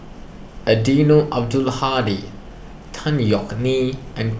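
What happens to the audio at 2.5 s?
Nothing goes wrong at 2.5 s; the speech there plays through intact, with no dropout, click, distortion or other fault.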